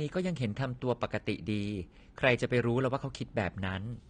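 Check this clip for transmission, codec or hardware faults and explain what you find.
One codec fault runs through the whole recording: AAC compression damage, plainly audible from start to finish. Nothing reaches above 9.7 kHz, so the speech sounds dull and loses its air. Sibilants and sustained vowels have a smeared, warbling, fizzy texture. The likely cause is AAC-LC encoding at a low bitrate, consistent with about 32 kbps, where the encoder lowers its cut-off and starves upper bands of bits. On a spectrogram this appears as a hard ceiling at 9.7 kHz. The waveform looks largely normal.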